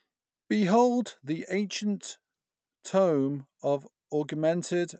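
No technical faults can be heard in the speech. It has come through a call path that behaves as such a link should, with the treble stopping at about 8 kHz in the way an Opus codec at a moderate bitrate would leave it.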